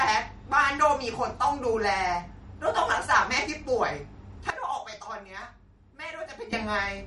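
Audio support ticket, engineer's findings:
Watery, swirly speech throughout, smeared consonant attacks, nothing above 11.2 kHz. Likely MP3 compression: bit-starved encoder cutting treble at a fixed frequency and zeroing weak spectral lines frame to frame, which fits a bitrate near 46 kbps.

Level drops abruptly at 4.50 s, speech and background noise together, about 12 dB down, then jumps back at 6.53 s. Likely a sudden gain jump: digital gain stepped sample-to-sample with no ramp, e.g. an unsmoothed gain setting or bit shift.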